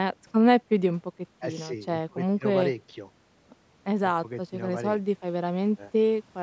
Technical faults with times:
none

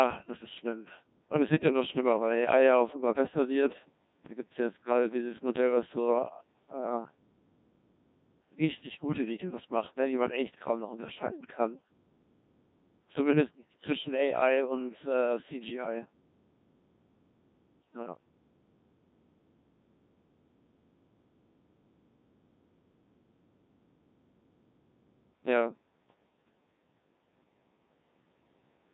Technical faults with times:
0.00-28.93 Codec 2 vocoder

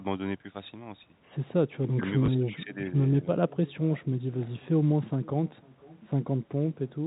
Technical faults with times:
0.00-7.07 echo with no canceller
2.26-2.28 packet loss with last packet repeated

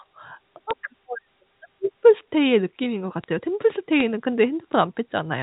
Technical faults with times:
0.71 bit error spike
3.24 bit error spike
4.00 bit error spike
4.73 bit error spike

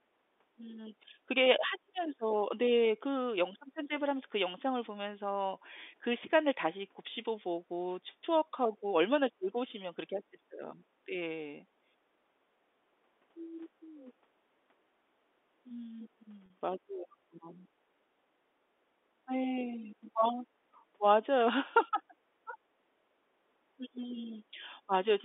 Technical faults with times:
16.46-16.50 packet loss with pitch repetition

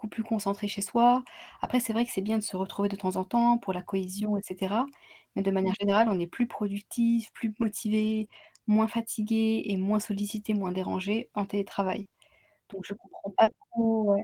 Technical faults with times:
0.73-0.79 lost packet rebuilt from error correction
5.73-13.55 scattered short gaps

